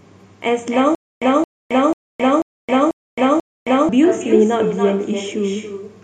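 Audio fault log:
throughout, echo with no canceller: every phrase is shadowed roughly 300 ms later by a quieter, thinner copy about 7 dB below the direct sound. The far end's loudspeaker is leaking into its microphone, and nothing subtracts that return before it travels back.
0.95 to 3.89 s, stutter with silent gaps: a 222 ms fragment repeats six times at an even 490 ms pace, each followed by 267 ms of dead digital silence. This likely comes from a stalled stream replaying its last buffer on each retry, losing the audio in between.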